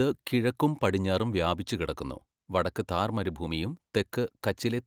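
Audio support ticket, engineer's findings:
No faults found in the speech clip. No symptom to trace to any component or mechanism.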